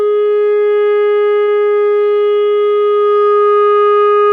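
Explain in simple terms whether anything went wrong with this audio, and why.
At about 1.43 s the music briefly stalls, until roughly 1.51 s. This is a short stall from a late packet: a chunk of audio arrived late, the receiver's small waiting store ran empty, and it stretched the last sound for about 43 ms to fill the gap. Unlike a dropout, where a piece is lost and the music jumps ahead, nothing is skipped. Playback resumes exactly where it left off, just 43 ms late.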